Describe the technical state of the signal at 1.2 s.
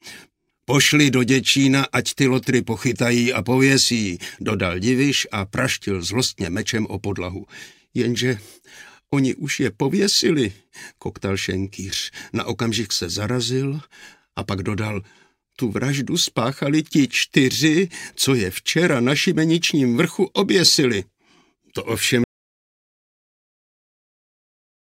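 At 1.2 s the signal is intact, with no audible technical fault at that moment.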